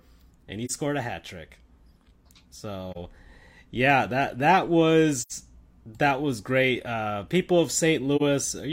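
Soft-edged dropouts cut into the speech at 0.65–0.71 s, 2.91–2.97 s, 5.20–5.32 s and 8.16–8.22 s. Each fades out and back in. This is AAC frame loss with muting. The decoder zeroed each missing stretch of about 43 ms (about 85 ms at 5.20 s), and the overlapping transform windows smeared those edges into fades.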